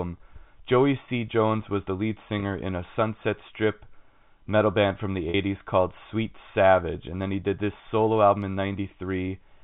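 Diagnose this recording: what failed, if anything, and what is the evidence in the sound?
Packet loss with pitch repetition at 2.40–2.42 s and 5.30–5.34 s, a network fault. The receiver bridged 20 ms and 40 ms gaps, consistent with one and two lost packets, by repeating the last pitch period, which sounds like a briefly held, buzzy note in the G.711 telephone-band speech.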